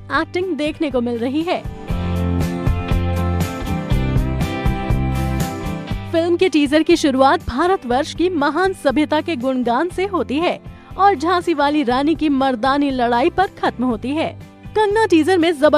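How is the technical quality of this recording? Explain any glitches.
Nothing stood out on listening, and there are no glitches to explain.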